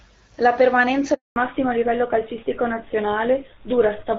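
At 1.14 s a handover gap cuts in. The call switches networks and no speech frames arrive. Silence lasts 220 ms, until 1.36 s.

From 1.36 s to the end there is a fallback to narrowband. Everything above 4 kHz is gone. The clear HD Voice sound turns dull and rough.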